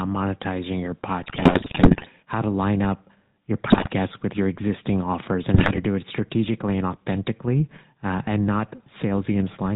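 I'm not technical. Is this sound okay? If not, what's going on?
No. The whole recording has passed through the GSM full-rate codec, an early mobile-phone voice system. It throws away everything above 4 kHz and rebuilds the voice roughly. That gives a muffled, buzzy, gravelly edge you can plainly hear throughout.

There are also GSM bit errors in three bursts: 1.22 to 2.09 s, 3.66 to 3.88 s, and 5.54 to 5.81 s. Here the signal was damaged in transit. The phone rebuilt the voice from wrong values, so it breaks into squawks, pops and gargling.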